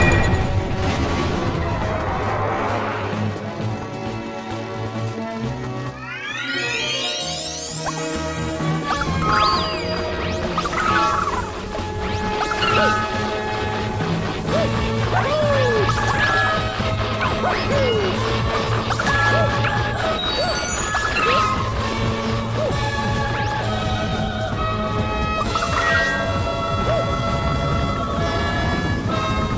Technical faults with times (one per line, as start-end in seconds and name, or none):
none